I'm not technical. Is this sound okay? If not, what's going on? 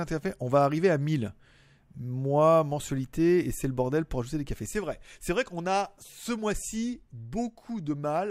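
No. At 4.66 seconds there's a sudden gain jump: the speech and its background noise both drop abruptly to about half their level, likely from a level setting applied without a fade.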